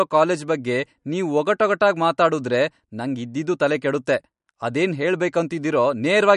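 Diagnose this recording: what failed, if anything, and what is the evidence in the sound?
Codec stage: likely MP3 compression, fitting a 48 kbps bitrate. The treble stops at 11.1 kHz throughout, with plainly audible coding damage.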